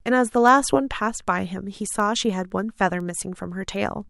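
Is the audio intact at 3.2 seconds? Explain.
No. Word clock ticks run from 0.23 to 4.01 s, so 3.2 s falls inside. Two digital clocks about 100 ppm apart slip roughly every 0.3 s, misreading one sample each time. Unlike random clicks or dropouts, these sharp ticks keep a steady rhythm.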